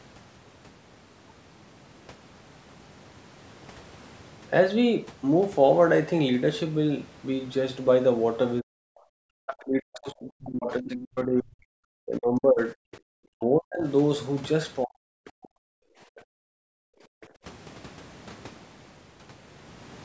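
From 8.6 to 13.87 s the speech is repeatedly pulled down, by roughly 40 dB at its deepest and for about four seconds in total. This is likely speech suppressed in double talk, with the echo canceller ducking the talker while the far end was also active. On the waveform the envelope shows sudden notches, and the spectrogram shows harmonics fading or breaking off in blocks.

Within that stretch, at 9.47 to 9.64 s and 10.87 to 11.06 s, a second voice comes through, about 10 dB and then about 20 dB below the speech. This is likely the other side's voice leaking through from residual loudspeaker echo. On the spectrogram it appears as brief, faint patches of harmonics that don't belong to the main talker.

A second suppression follows from 14.84 to 15.62 s, again reaching roughly 40 dB down for about half a second.

From 15.9 to 17.44 s the room sound is the background gated by the echo canceller, dropping by about 38 dB. 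On the spectrogram the noise floor goes almost blank, and it returns once the gate releases.

Two shorter leaks sit inside this gap, at 16.16 to 16.22 s and 17.21 to 17.26 s, at about 30 and 35 dB below the speech. They show as thin slivers of energy against the emptied floor.

Across the clip, nothing appears above 8 kHz, which is normal for call processing and not a fault.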